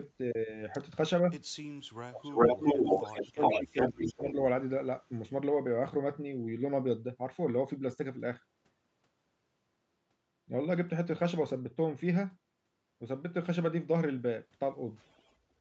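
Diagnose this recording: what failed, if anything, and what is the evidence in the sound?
Between 2.08 and 4.39 s the speech dips in pieces, about 1.5 s in total, falling by roughly 20 dB at its deepest. This is speech suppressed in double talk at the call-processing stage, likely an echo canceller turning down both sides when it cannot separate them.

A delayed copy of the speech, trailing by about 409 ms, sounds at 2.24–3.25 s about 5 dB louder than the direct speech, at 3.41–4.31 s about equally loud, and faintly at 14.97–15.33 s. This echo leak is likely the far loudspeaker's sound escaping cancellation and being sent back.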